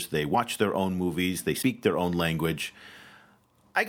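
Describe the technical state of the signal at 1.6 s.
At 1.61 to 1.63 s, between "their own movies they" and "their own language", the speech jumps forward where compressed frames were skipped. Roughly three frames of about 26.1 ms each never reached playback, either missing from the file or rejected by the decoder as damaged, so around 70 ms of audio is lost.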